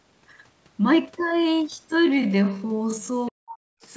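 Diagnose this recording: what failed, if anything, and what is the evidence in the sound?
From 1.0 s to the end, the speech plays at about half speed, a speed factor of 0.51, yet its pitch doesn't drop. The pace slows abruptly. This is a time-stretched section, likely made in processing or storage when software padded the audio to a target length by repeating fragments rather than resampling.

At 3.26 to 3.31 s, a faint second voice comes through, very quiet against the main speech. This is the other side's voice leaking through: the far end, played on the talker's loudspeaker, reached the microphone, and the call's echo canceller likely failed to remove this fragment completely.

From 3.29 to 3.81 s, the talker's speech is pulled down sharply, falling by roughly 40 dB at its deepest and affected for about half a second. This is speech suppressed in double talk. With both sides active, the call processing likely couldn't distinguish the near voice from the loudspeaker echo and attenuated everything. 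The microphone path's band limit, with nothing above 8 kHz, is consistent with normal call processing.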